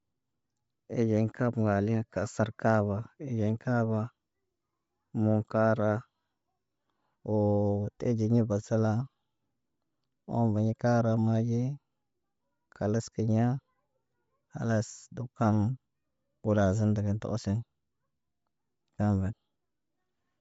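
From start to finish the speech is cut off above about 7.7 kHz and has a breathy, grainy edge, with the damage plainly audible. That's likely Bluetooth LC3 compression at a low rate, roughly 32 kbps on 10 ms frames, filling the discarded highs with noise.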